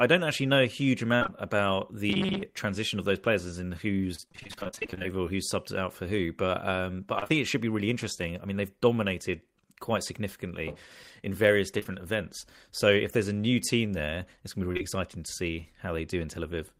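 From 1.15 to 1.30 s there is repeated packet loss, heard as robotic sound. Three gaps fall close together, the longest 57 ms. Each is patched by extending the last sound. More than half of the stretch is filled-in audio, so it turns choppy and mechanical.

From 2.10 to 2.44 s the sound becomes a rigid, metallic buzz at 188 Hz. About half the audio there is repeated rather than new. This is likely robotic sound from repeated short buffers, each roughly 5.3 ms long.

Repeated packet loss returns from 4.15 to 5.13 s. There are 23 gaps, none longer than 28 ms, and about half the span is concealed. It happens again from 7.19 to 7.31 s, between "um but" and "it should be really", with three gaps. Both stretches sound choppy and robotic.

Short concealed packet loss follows in two pairs. The first pair runs from 11.79 to 11.87 s. The second runs from 14.73 to 14.81 s, after "it's going to be" and before "exciting to see". 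Each pair is two 20 ms holes, back to back. The receiver filled them by continuing the last sound. Each pair comes across as a brief smear or wobble.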